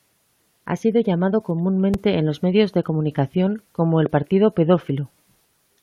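A voltage spike, likely from a plug, switch or static discharge, gets into this speech clip twice, producing a loud pop at 1.94–1.96 s after "sido llamado" and a stronger one at 4.06–4.08 s after "medios de comunicación como", each a single sharp thump standing clearly above the speech, which continues underneath.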